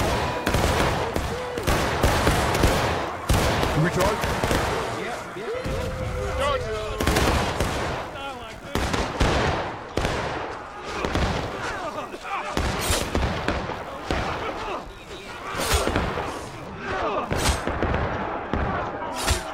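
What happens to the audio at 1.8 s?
At 1.8 s the computer's shifting processor, graphics or mouse load is disturbing the ground it shares with the audio circuit. This computer activity noise runs throughout the clip as a faint buzzing chirp, pulsing around 70 times a second, roughly 35 dB below the sound.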